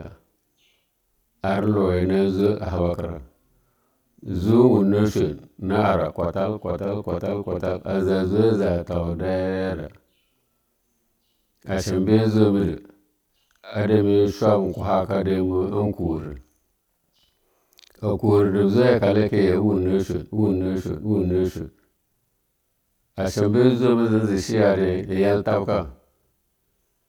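Throughout the speech, channel delay causes doubling. One channel runs 46.4 ms late, which fits a 2048-sample buffer. Summed to mono, each syllable gets an equal-level slap echo.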